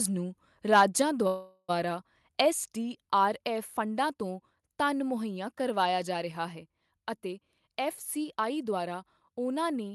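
A speech recording carried over an Opus call path, audible as a top end that stops near 12 kHz, with four faults. From 0.72 to 1.02 s the microphone input was likely set too high, driving peaks about 4 dB past the converter's limit in a microphone overload that flattens a few percent of samples and gives those syllables a harsh crackle. At 1.02 s the software likely reacted by stepping the microphone volume down by about 3 dB, so voice and background both drop suddenly. From 1.27 to 1.72 s delayed packets likely emptied the jitter buffer, causing a call audio freeze: the receiver stretched the last sound into a fading buzz for about 411 ms, then resumed without losing anything. From 6.92 to 8.95 s a jitter buffer speed-up trimmed about 150 ms of short pitch-period pieces to cut the built-up delay, so the speech runs about 6% fast at unchanged pitch and sounds hurried.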